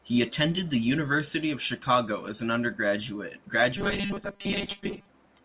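From 3.77 s to 5.09 s the sound turns into a rigid, metallic buzz at 200 Hz. It still loosely tracks the talker. This is robotic sound from repeated short buffers. The likely cause is late audio, with 5 ms chunks replayed in place of most of the real signal.

Inside that stretch, at 4.07 s to 4.13 s, comes a short concealed packet loss. About 30 ms of audio never arrived. The receiver filled 26 ms by extending the previous sound, then blended back. It is heard as a brief smear on top of the buzz. The narrowband call codec keeps everything below 4 kHz.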